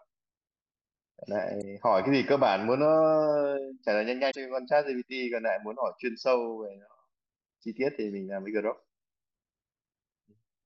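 At 1.58 to 1.64 s and again at 4.27 to 4.35 s, the speech breaks into a brief glitch. Each is damaged data in the compressed stream. Corrupted bytes make the decoder misread frames and lose sync until it finds the next valid header.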